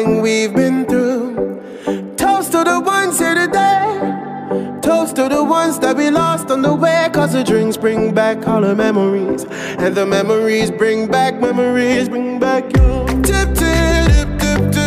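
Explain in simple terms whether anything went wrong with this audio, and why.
No audible faults: no dropouts, distortion, glitches or other transport or processing problems anywhere in the recording.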